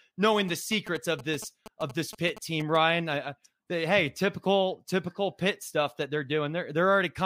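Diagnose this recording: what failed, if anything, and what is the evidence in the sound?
GSM signalling bursts crept in at the analogue wiring from 0.4 to 2.77 s, ending just before "I I they hey": a galloping dit-dit-dit of short 217 Hz buzzes, roughly 15 dB under the speech. The circuit rectified a nearby 2G phone's radio bursts.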